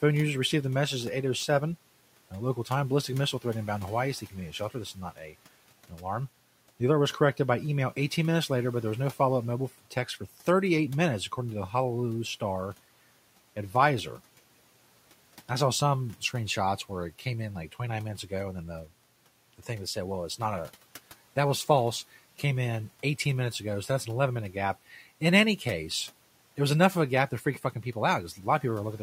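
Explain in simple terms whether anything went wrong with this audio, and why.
Something did go wrong. Twice, the noise suppressor mistook parts of the speech for noise. This is speech cut by the noise suppressor. It happened from 4.95 to 5.35 seconds and from 5.89 to 6.05 seconds. Those sounds were turned down and come across faint or swallowed.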